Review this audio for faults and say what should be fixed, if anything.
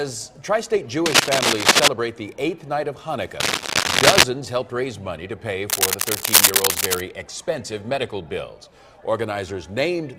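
Cable scratch noise sits at 1.06–1.88 s, 3.39–4.24 s and 5.69–7.01 s. Dense, ragged rustling rises about 10 dB, then about 5 dB, above the sound, likely from a worn connector's contact resistance jumping as it moves. Unlike steady crackle or isolated clicks, it comes in handling-length bursts. Replace or firmly secure worn cables and connectors before recording.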